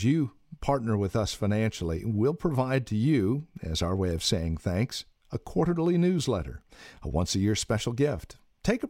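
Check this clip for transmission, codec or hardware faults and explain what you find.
No transmission, codec or hardware faults can be heard in this speech recording; the signal stays continuous and stable throughout.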